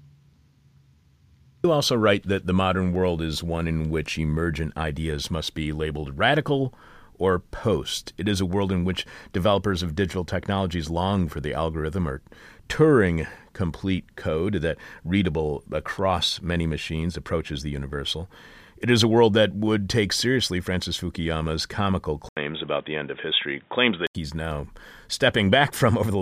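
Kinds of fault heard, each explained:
Input switched to a poorer device: the recording likely jumped to a narrower-band input, so from 22.29 to 24.15 s the speech turns boxy with nothing above 3.8 kHz, following an 80 ms gap, with faint added background noise but steady loudness, starting just before "he's now".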